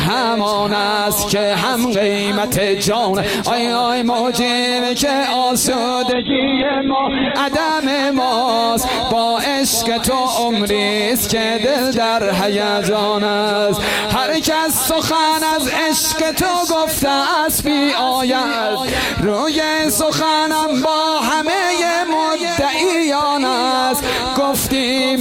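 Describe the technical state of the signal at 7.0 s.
At 7.0 s the signal sits inside a call bitrate drop lasting from 6.12 to 7.45 s. The encoder, starved of bits, codes coarsely and cuts the band from 20 kHz to 4 kHz, so the sound turns muffled and watery. A spectrogram shows everything above 4 kHz abruptly blank.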